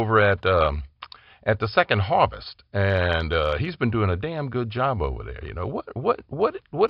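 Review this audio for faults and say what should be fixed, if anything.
Nothing to fix: no faults are audible anywhere in the speech.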